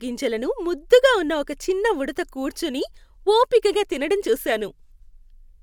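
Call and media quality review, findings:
No faults found in this speech recording.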